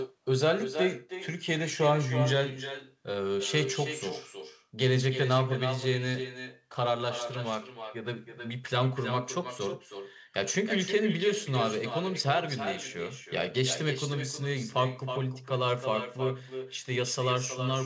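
From start to finish, the speech carries an echo with no canceller: the far end's loudspeaker feeds its microphone and nothing removes it, so each phrase returns about a third of a second later, about 9 dB down and thinner, through a call path whose band stops at 8 kHz.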